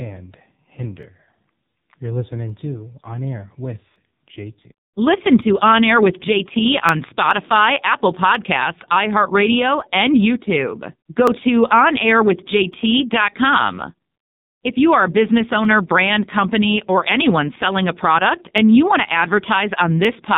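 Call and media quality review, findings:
AMR narrowband mobile codec, whole clip: buzzy, synthetic speech, nothing above 4 kHz. Sounds like AMR-NB squeezed to 5.9 kbps, pulse model starved of bits.

Clock drift buffer slips, 1.03 to 20.05 s: regular click every 1.46 s, around fifteen total. Likely two clocks a few hundred ppm apart, dropping or repeating tiny sample blocks.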